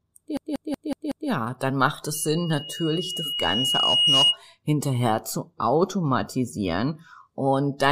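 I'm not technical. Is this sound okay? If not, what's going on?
No. From 0.37 to 1.30 s, a 0.19-second snippet of the speech repeats five times in a rapid stutter: a system hang loop, where the computer froze and replayed its sound buffer. From 2.14 to 4.39 s, a high 2.9 kHz whistle swells over about two seconds: loudspeaker feedback squeal, caused by a microphone picking up its own speaker.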